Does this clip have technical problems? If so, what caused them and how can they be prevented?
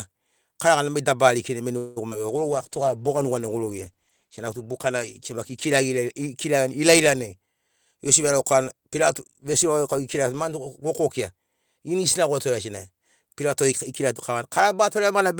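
Yes. A call audio freeze at 1.77 to 1.98 s, just after "likinai mai", stretches the last sound into a fading buzz for about 190 ms. The cause is likely delayed packets draining the jitter buffer, so nothing is lost but the call falls 190 ms behind. A steadier network path or a deeper jitter buffer would prevent it.

Short concealed packet loss between 2.10 and 2.27 s leaves a brief smear where about 20 ms never arrived and was filled by extending the preceding sound. Forward error correction or redundancy on the stream would prevent it.

A call bitrate drop from 2.30 to 6.93 s takes the encoder from 40 to 14 kbps, staying at the bottom for about 3.3 s, so the audio turns rough and dull as coarser coding removes high frequencies. More available bandwidth or gentler congestion control would prevent it.

A jitter buffer speed-up from 7.42 to 9.37 s runs the audio at about 110% speed without a pitch change, as the receiver trims roughly a fifth of a second of excess buffered delay. 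Avoiding bursty packet delivery would prevent it.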